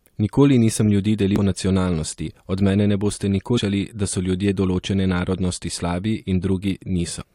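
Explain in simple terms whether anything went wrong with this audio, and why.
Three short glitches break into the speech: at 1.36 s, right after "nisem ljudi"; from 3.57 to 3.59 s, after "od mene ne boste"; and from 7.21 to 7.23 s. This is damaged data in a compressed stream. Parts of the file were corrupted, so the decoder misread those frames and briefly lost its place.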